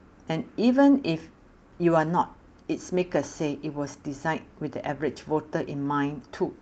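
Speech carried over a WebRTC call path with no technical fault to report; the top end stops at about 8 kHz, consistent with an Opus wideband stream at around 40 kbps, as expected for that path.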